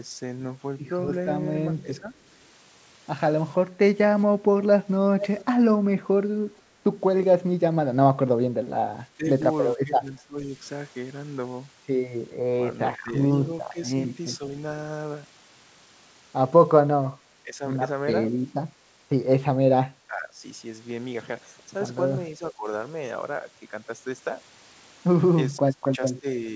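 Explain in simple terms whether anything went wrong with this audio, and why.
A couple of things go wrong, both typical of a call where someone is on a loudspeaker.

From 1.75 to 3.76 s the speech dips in short pieces, adding up to roughly a third of a second. That's speech suppressed in double talk. The likely cause is that both sides talked at once, and the echo canceller couldn't tell this talker apart from the loudspeaker echo, so it turned everything down to be safe.

At 5.2 to 6.62 s a delayed copy of the voice trails about 450 ms behind, quieter than the main speech. That's an echo leak: likely the far end's loudspeaker sound got back into its microphone, the echo canceller didn't catch all of it, and the leftover was sent back down the line.

From 8.47 s to the end, the same double-talk suppression returns and keeps pulling the speech down, with the deepest cuts stronger than the early ones. 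The other side is presumably talking over this stretch, and the canceller keeps ducking the voice each time. The top end stopping around 8 kHz comes from the call codec and is normal for this kind of call.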